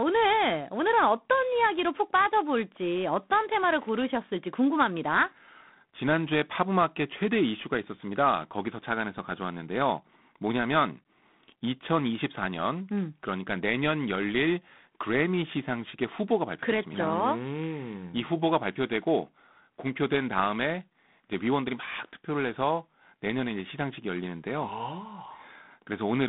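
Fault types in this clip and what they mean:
G.726 ADPCM: the speech is coded as coarse sample-to-sample differences from an adaptive prediction, and here the quantisation error is plainly audible as a harsh, rasping hiss riding on every syllable, a roughness that fits the 24 kbit/s rate. The band runs from about 150 Hz to 3.6 kHz, with nothing above 3.8 kHz. Unlike a steady background hiss or simple band-limiting, this grit rises and falls with the speech level and vanishes in pauses.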